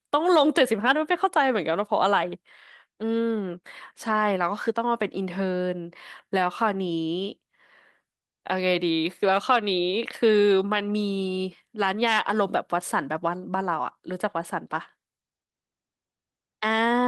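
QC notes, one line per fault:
No faults found on review of the speech.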